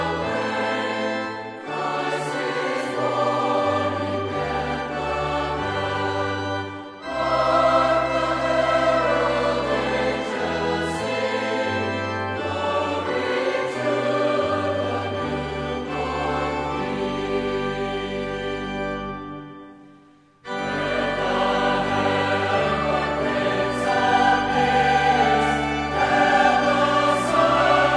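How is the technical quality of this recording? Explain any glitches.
No glitches to explain; nothing in the recording registers as a technical fault.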